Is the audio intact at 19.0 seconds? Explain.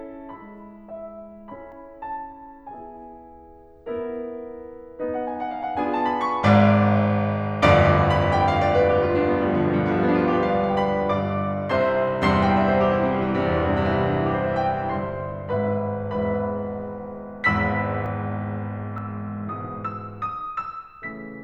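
No. At 18.98 s the music jumps. A short piece, about 20 ms, is missing, and the two sides are joined with no gap. This is likely a dropped buffer (overrun): the samples were overwritten before the program collected them.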